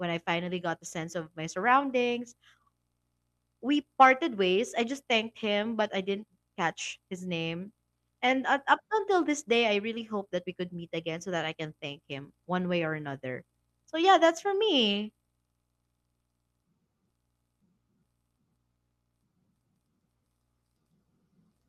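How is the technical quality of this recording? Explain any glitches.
No technical faults can be heard anywhere in the recording, so there is nothing to explain.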